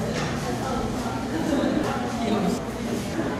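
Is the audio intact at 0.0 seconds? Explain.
Yes, the sound is intact at 0.0 seconds, with no fault present at that moment.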